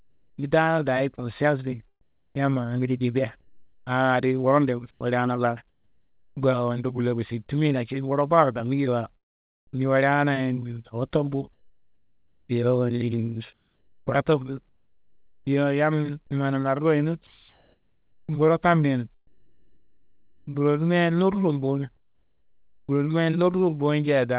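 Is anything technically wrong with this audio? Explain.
Yes. The audio, speech heard through a call path with nothing above 4 kHz, has three faults.

From 0 to 6.37 s, the pauses carry a flat, featureless hiss instead of the real room background, about 2 s in all. This is comfort noise in place of the background, likely because discontinuous transmission stopped sending between phrases and the receiver synthesised filler noise.

At 4.91 s, about 100 ms of audio gives way to steady noise, with roughly 50 ms of actual speech missing. That is sound dropped by the voice detector: a quiet stretch was likely judged to be background, so transmission halted and comfort noise covered the gap.

From 13.53 to 22.89 s, the speech turns choppy, with edges and quiet syllables clipped, about 4.5 s replaced overall. This is sound chopped by the voice detector, likely toggling repeatedly between sending and not sending.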